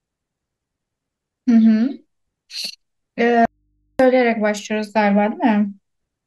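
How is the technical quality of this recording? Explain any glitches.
There's one real glitch in the speech. From 3.45 to 3.99 s there's an audio dropout to a faint residue: the signal vanishes abruptly for about 0.54 s, leaving only mains hum, roughly 50 dB down. It's likely a broken connection with the input left open.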